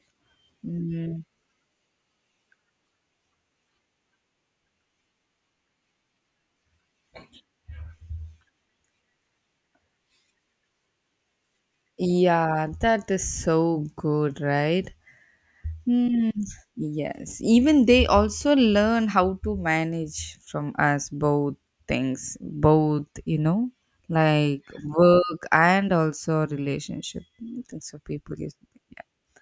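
No technical faults are present anywhere in the recording.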